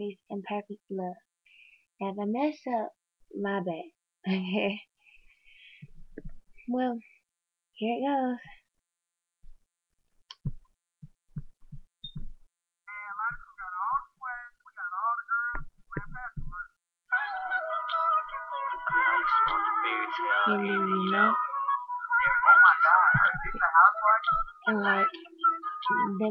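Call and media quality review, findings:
No audible transport or processing faults found: no dropouts, discontinuities, level jumps or distortion events were heard anywhere in the recording.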